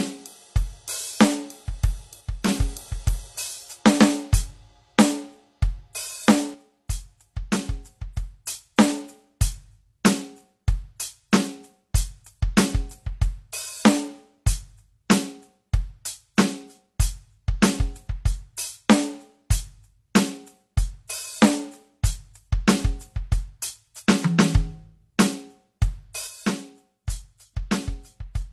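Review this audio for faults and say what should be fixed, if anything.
Transcoding between lossy codecs runs through the whole track: the music has nothing above 12.1 kHz, and two layers of coding artefacts sit on top of each other. This likely comes from a low-bitrate HE-AAC encode re-encoded to AAC-LC at a somewhat higher rate. The second encoder spends its bits reproducing the first one's artefacts while adding its own, and the lowest cut-off in the chain remains. To prevent it, encode once from the original lossless master rather than from an existing lossy file.

One channel drops out at 2.21–2.48 s, 6.54–8.47 s, and from 26.27 s to the end. In each stretch, whatever was common to both sides falls abruptly by about 6 dB. This is the likely result of one stereo leg being lost before a mono sum, leaving half the signal. To prevent it, secure and monitor both channel connections or streams so a lost leg is caught and fixed at the source.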